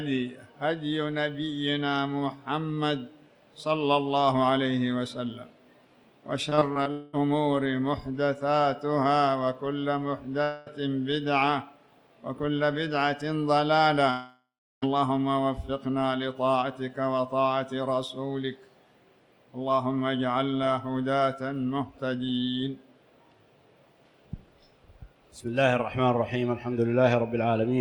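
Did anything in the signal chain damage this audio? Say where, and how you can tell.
Yes. Between 6.49 and 6.87 s there is repeated packet loss at the network stage: five short gaps, the longest 22 ms, patched by extending the preceding audio. About 26% of that stretch is concealed, giving a choppy texture with fragments missing.

Long network dropouts, likely from the network stage, occur at 6.91 to 7.15 s, 10.43 to 10.68 s and 14.10 to 14.84 s. Each is heard as a fading buzz or hiss. The last one decays into roughly 350 ms of silence before the audio resumes, with that section missing.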